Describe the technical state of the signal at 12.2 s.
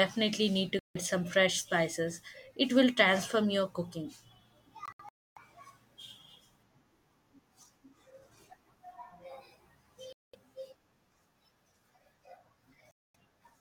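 Around 12.2 s the speech signal is intact, with no dropout, clipping, glitch or other technical fault at that point.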